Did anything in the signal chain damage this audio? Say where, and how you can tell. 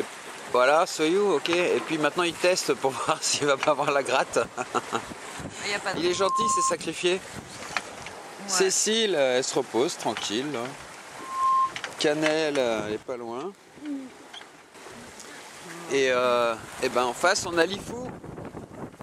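Yes. A single 1.1 kHz tone swells over about a third of a second into a loudspeaker feedback squeal, roughly 5 dB above the sound, at 6.06–6.77 s and again at 11.18–11.75 s. The fault is in the acoustic and analogue loop: the microphone picks up the loudspeaker it feeds, and the loop gain exceeds one at 1.1 kHz.

The level drops abruptly by about 8 dB at 13.03 s and snaps back at 14.75 s. A brief lift of about 6 dB follows between 17.53 and 17.62 s, with the background noise moving in step each time. These are likely sudden gain jumps from digital gain applied in the call processing without a ramp.

At 16.91 s the sound skips forward by a few milliseconds with no silent gap. This most likely points to a dropped buffer (overrun) at the driver stage, where samples were overwritten before the software read them and the two sides were joined directly.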